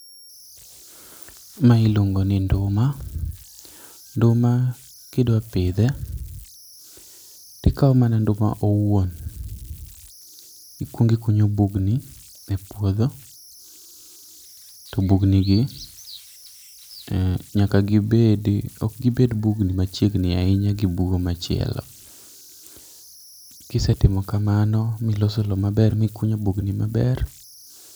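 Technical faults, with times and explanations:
Throughout, converter idle tones: a high whistle, near 5 kHz, sits in the pauses of the speech, with a grainy hiss under the quieter passages, about 28 dB below the signal. An undithered delta-sigma converter, given very small input, settles into repeating bit patterns that produce steady tones.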